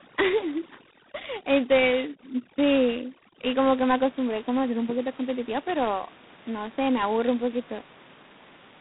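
From 0 to 3.6 s, overdone noise removal strips bands near its noise estimate along with quieter speech detail, leaving a near-silent, twinkling background. Throughout the clip, G.726 ADPCM codes each sample as a coarse difference from a prediction, with nothing above 3.9 kHz. The harsh, rasping hiss riding the speech level fits the 16 kbit/s mode. After the noise removal ends, the room noise sits about 25 dB below the speech.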